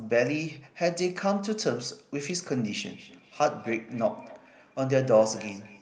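From 2.84 s to the end, the speech picks up a feedback echo between two devices. Each word returns at a steady interval of roughly a fifth of a second. The repeats are thin and ringing. They peak about 18 dB below the speech. Two devices in the same room are on one call. One plays back what the other's microphone sent, and that microphone hears it again. Each device's echo canceller removes only its own playback, so this loop survives.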